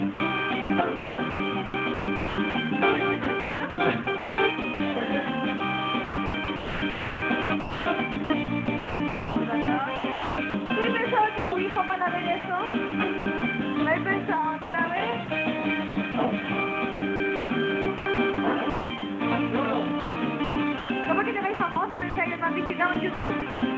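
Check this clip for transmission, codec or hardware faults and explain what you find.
One fault recurs across most of the clip, carried over a call path whose band stops at 8 kHz, which fits G.722.

Sound chopped by the voice detector, 0.14–13.42 s, 14.62–19.02 s and 20.00–23.62 s: a sender-side detector likely toggled transmission, substituting comfort noise for about 4.4 s, 0.96 s and 1.06 s of sound respectively, so the audio turns choppy.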